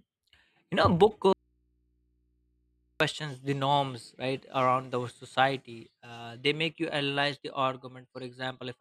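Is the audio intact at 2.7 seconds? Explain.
No. At 2.7 s you're inside an audio dropout to a faint residue running from 1.33 to 3.00 s. The speech cuts out abruptly for about 1.7 s, leaving just mains hum roughly 45 dB down, likely from a live input that lost its signal.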